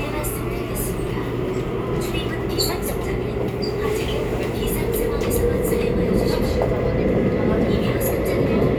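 No technical faults can be heard anywhere in this recording.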